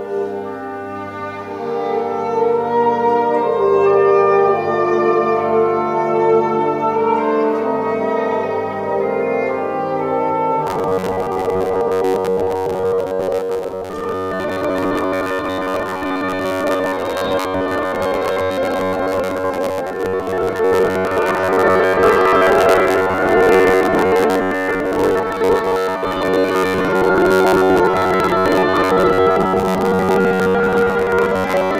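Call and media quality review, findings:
Robotic sound from repeated short buffers, 10.67 s to end. Rigid metallic buzz at 93.8 Hz. Likely buffer underrun looping a 10.7 ms chunk, skipping most real audio.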